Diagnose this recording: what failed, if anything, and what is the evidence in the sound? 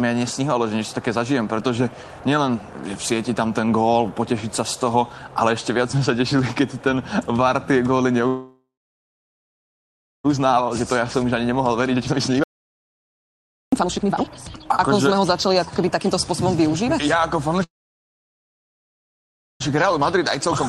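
The network path stalled twice, most likely because packets were held up and the receiver's jitter buffer ran empty, producing a call audio freeze. From 8.27 to 10.26 s the last sound is stretched into a short fading buzz, then about 1.56 s of silence. From 17.63 to 19.62 s the fill is almost all silence, about 1.91 s. Each time the audio resumes where it stopped, so nearly 2 s of gap is inserted but nothing is lost.

After each stall the receiver's jitter buffer was holding too much delayed audio and worked it off with a jitter buffer speed-up, cutting out pitch-period-length slices repeatedly. From 10.38 to 17.19 s the sound runs at 129% speed at unchanged pitch, sounding noticeably hurried as roughly 2 s is trimmed. From 19.72 to 20.47 s the catch-up is gentle, at 104% speed, removing only about 40 ms.

At the capture end, likely a lost input such as a dropped device or link, the encoder went on writing silence, giving an audio dropout to silence. 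From 12.44 to 13.72 s, inside the hurried stretch, the sound cuts off abruptly and then cuts back in mid-flow. The roughly 1.29 s gap is silent with no room tone, and whatever occurred during it is gone. Around it the audio went through the Opus call codec, with its band limit near 12 kHz.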